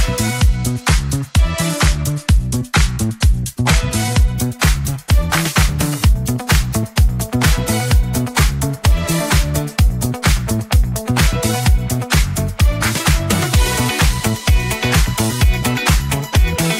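From about 0.38 s to 4.34 s there's a Bluetooth SBC bit pool drop. The link clearly got congested and the sender cut back how many bits it spends per frame to keep the stream alive. The sound is consistent with the bit pool falling from around 28 to 13, roughly 102 kbps. Starved like that, the highest sub-bands get little or nothing and the rest are quantised coarsely, so the top end goes dull and a gritty grain creeps in until the rate comes back.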